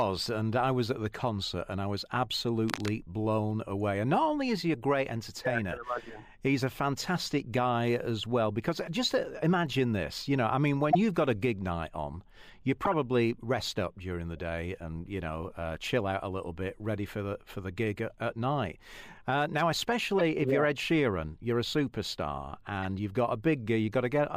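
From 2.68 to 2.94 s, a burst of cable scratch noise rasps over the speech about 10 dB below its level. The likely cause is a worn lead or connector being moved, its contact resistance flickering. On a spectrogram it shows as dense, ragged broadband speckle; the waveform gains jagged spikes.

Corrupt frame decoded faults follow at 10.91–10.95 s, 12.85–12.94 s, 20.19–20.21 s and 22.83–22.85 s. Each is a damaged compressed frame played regardless, with energy at wrong frequencies, heard as a short chirp or blip. The 12.85 s event spans a few frames; the last is the weakest, peaking near -25 dBFS. Spectrograms show brief misplaced blocks.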